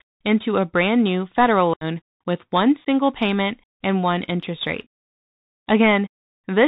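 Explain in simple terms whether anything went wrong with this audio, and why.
Yes, two things went wrong. The whole recording went through a Bluetooth CVSD headset codec. It cuts everything above 4 kHz, leaving a muffled, phone-like sound with a grainy hiss underneath and scratchy s sounds. That grain, rather than a clean dullness, is what sets it apart from simple filtering.

There is also unconcealed Bluetooth headset packet loss. The sound drops out abruptly from 1.74 to 1.84 s, after "a brand new federal" (about 75 ms missing, roughly ten small packets). A brief second hole follows at 2.85 to 2.87 s, just before "payment and one interest". Nothing fills these gaps, so they are hard-edged holes rather than smeared or repeated sound.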